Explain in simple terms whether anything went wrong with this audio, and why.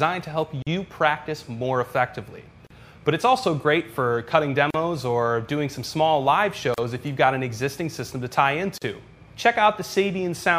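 The sound briefly drops out five times, at 0.62, 2.67, 4.70, 6.74 and 8.78 seconds. Each is a tiny hole of silence, about 43 milliseconds the first time and about 38 after that, coming every 2 seconds. The sound then resumes where it left off. This is a gap at a join of encoded pieces: the audio was compressed in 2-second chunks and stuck together, and each chunk kept its own stretch of encoder padding.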